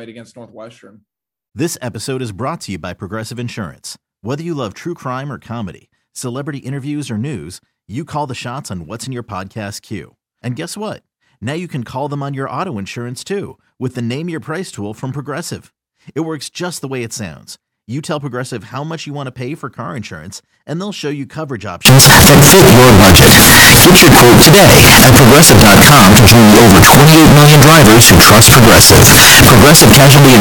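A speech clip that turns into a float read as integer fault from 21.85 s to the end at 30.41 s. It becomes a loud, harsh, near-square wave with noise as loud as speech, likely 32-bit float samples read as 32-bit integers.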